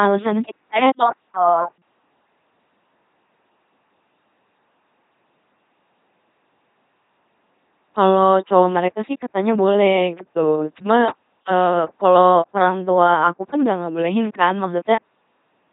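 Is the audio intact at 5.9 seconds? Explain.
No. The LPC-10 vocoder runs throughout, driving a short all-pole filter with pure buzz or hiss, so speech turns robotic with nothing above 3.8 kHz, unlike smeary transform-codec warble.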